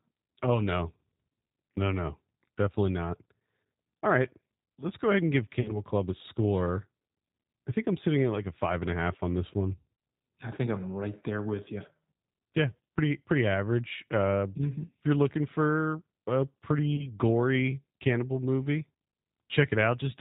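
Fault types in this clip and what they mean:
G.729 codec: the whole recording passes through a low-bitrate speech codec at 8 kbit/s, which rebuilds it from a vocal-tract model. That leaves it band-limited below 4 kHz, plainly rough and a bit synthetic throughout.
VoIP packet loss concealed by the speech codec: audio goes missing twice, at about 5.61–5.82 s after "go ahead and give" and about 16.96–17.07 s after "you're looking for a". The decoder stretches the last sound into a fading buzzy tone or coloured noise, and it sounds weak briefly afterward.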